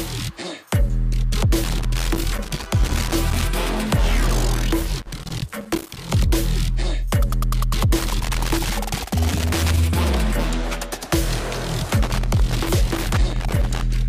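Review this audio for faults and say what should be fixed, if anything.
Loose connector crackle appears four times: 1.64 to 3.44 s, 4.55 to 6.10 s, 7.97 to 9.77 s, and 12.03 to 13.83 s. Each is an irregular burst of scratching. A worn contact keeps making and breaking, chopping the signal. Reseat, clean or replace the suspect connector and cable.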